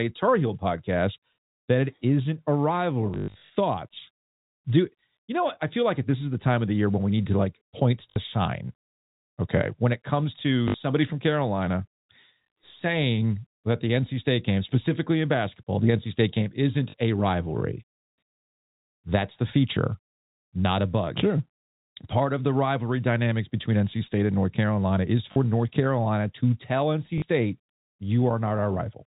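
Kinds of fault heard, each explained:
packet loss with last packet repeated: packets went missing and the receiver replayed the previous one, causing robotic stutters at six points, longest after "that it isn't a" near 3.1 s.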